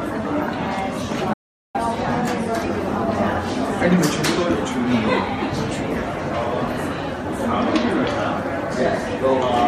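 At 1.34 s the sound cuts off abruptly and returns at 1.75 s. This is an audio dropout to silence. The gap lasts about 0.41 s and is silent, with no room tone. The input was likely lost while recording continued. Whatever played then is gone.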